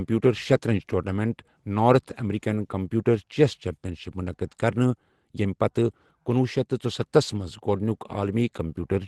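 Speech over an Opus call path whose 12 kHz bandwidth fits about 24 kbps. It has a lost packet rebuilt from error correction at 2.51–2.53 s and 8.11 s: each 20 ms frame turns briefly rough and noisy rather than dropping out or smearing, because the next packet's low-bitrate copy filled it.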